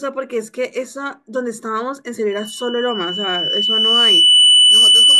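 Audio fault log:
2.30–5.20 s, loudspeaker feedback squeal: a single 3 kHz tone appears and swells steadily over roughly two seconds until it sits around 15 dB above the speech, running to the end of the clip. A microphone is picking up the loudspeaker it feeds, and at 3 kHz the gain around that loop is above one, so each pass round the loop makes the tone louder.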